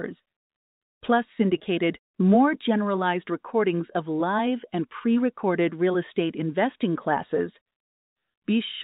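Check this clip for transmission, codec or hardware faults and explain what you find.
One transmission fault is audible: packet loss with pitch repetition at 1.58 to 1.60 s. A stretch of about 20 ms of the stream went missing, which fits a single lost packet. The receiver concealed it by repeating the last pitch period of the speech to fill the hole. Because the gap is so short, it is heard as a brief held, buzzy tone rather than a dropout before the speech carries on. The G.711 telephone coding limits the band to below 4 kHz, as expected for that format.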